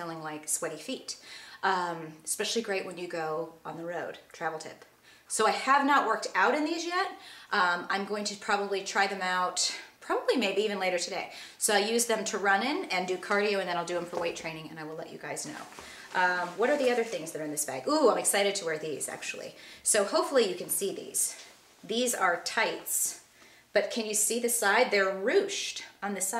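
No technical faults can be heard anywhere in this audio.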